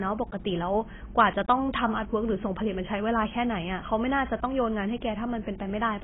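Heavy AAC compression, likely AAC-LC squeezed to a very low rate that fits about 16 kbps, runs through the whole clip. The encoder discards everything above 3.8 kHz and coarsely quantises what remains, so the speech sounds dull and muffled, with smeared, warbling sibilants.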